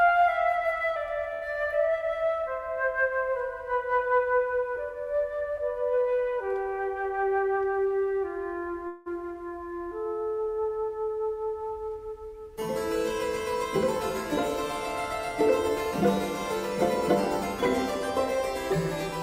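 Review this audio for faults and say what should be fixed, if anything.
From 1.33 to 1.44 s the sound hangs on itself for 82 ms, held too long with a buzz or dip, then carries on with nothing lost. This is a short stall from a late packet: the jitter buffer ran empty, the receiver stretched the last sound, and playback delay rose by 82 ms. A deeper jitter buffer target would absorb such late arrivals.

From 6.95 to 7.87 s the audio is hurried, running at 109% speed with unchanged pitch. This is a jitter buffer speed-up: the buffer held more than its target, so the receiver cut short pitch-period pieces repeatedly, about a tenth of a second in total. Draining excess delay more gradually would keep the speed change below an audible level.

From 8.87 to 9.08 s the sound freezes for 187 ms, the last sound continuing as a fading buzz or hiss with no silence, then resuming where it stopped with nothing missing. 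This call audio freeze was likely caused by packets held up in transit, which emptied the jitter buffer. Reducing network delay spikes, or allowing more buffering, would prevent it.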